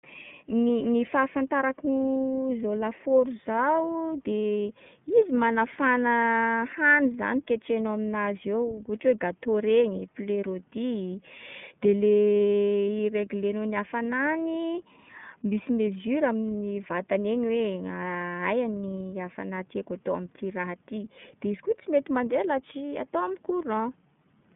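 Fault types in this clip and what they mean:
iLBC codec: narrowband frames coded independently; the speech stops above 3.7 kHz and sounds plainly rough and synthetic, fitting 30 ms frames near 13.3 kbps.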